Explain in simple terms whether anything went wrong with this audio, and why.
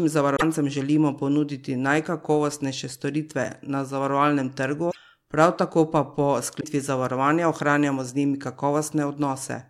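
Three short glitches at 0.35–0.42 s, 4.90–4.97 s (before "prav tako pa po") and 6.60–6.64 s: the sound skips ahead and garbles, likely a broken MP3 bit reservoir after lost frames.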